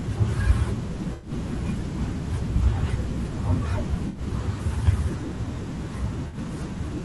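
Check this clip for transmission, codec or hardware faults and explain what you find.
The speech carries two faults: codec roughness throughout and three brief dropouts that the decoder has patched over.

Low-delay AAC compression runs through the whole clip, likely AAC-ELD at a rate that fits about 32 kbps. Its short frames resolve pitch harmonics coarsely, so the voice sounds grainy and rough. A spectrogram shows noise filling the gaps between harmonics and a smeared, synthetic-looking top band.

AAC frame loss with concealment occurs at 1.13 to 1.31 s, 4.07 to 4.21 s and 6.27 to 6.37 s, covering about 100, 80 and 60 ms. The decoder rebuilt each gap from the last good spectrum, producing a smeared, phasey patch. On a spectrogram these appear as blurred, stationary blocks; the waveform loses its normal envelope detail there.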